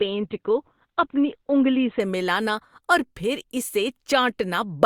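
From 0.0 to 2.0 s the speech is dull and smeared. Nothing sounds above 4.4 kHz. This is an adaptive stream starting at a low bitrate, likely near 12 kbit/s Opus. At 2.0 s the sound jumps to a much higher quality, with no gap.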